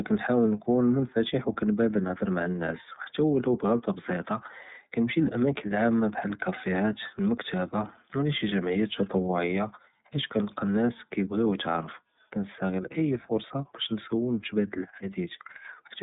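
iLBC codec damage runs through the whole speech clip, and it is plainly audible. The codec codes each frame's excitation on its own, and the roughness fits 30 ms frames at about 13.33 kbps. Energy sits between 150 Hz and 3.7 kHz, with nothing above 3.8 kHz, so the speech sounds boxed-in and telephone-like. A grainy, slightly synthetic texture clings to every syllable.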